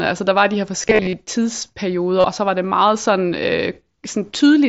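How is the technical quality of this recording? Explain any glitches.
The recording has concealed Bluetooth headset packet loss in three places. From 0.83 to 1.13 s, dropouts are scattered across about 0.3 s, totalling about 158 ms. The longest run is 30 ms. Another loss covers 2.20 to 2.24 s, and a brief one falls at 4.38 s. Packets from headset to phone went missing. The receiver filled each gap by repeating the best-matching recent stretch of waveform. This gives a short buzzy, held tone and a slight warble as real speech resumes. All of this passes through the wideband mSBC headset link.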